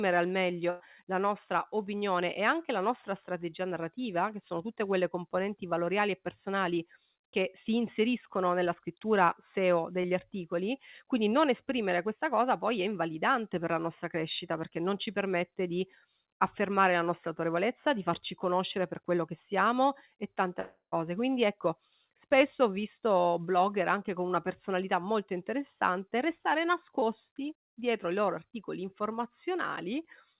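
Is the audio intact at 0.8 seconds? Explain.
No. At 0.8 seconds the sound is inside a burst of packet loss running from 0.70 to 0.82 s. About 100 ms of audio never arrived in time to be played. The receiver covered the hole by stretching the last received sound for roughly 98 ms and fading it down. You hear the last sound briefly held and dimming. Then the speech jumps ahead with that stretch gone. It comes through a G.711 call path with nothing above 4 kHz.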